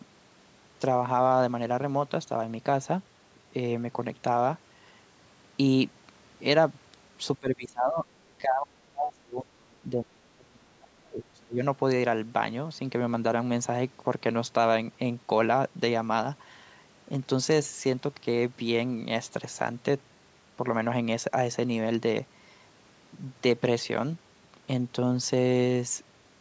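From 7.38 to 8.11 s the speech dips by around 20 dB, then from 8.39 to 11.63 s it sinks harder, roughly 35 dB at its deepest. That's speech suppressed in double talk, likely an echo canceller turning the talker down while the far side spoke.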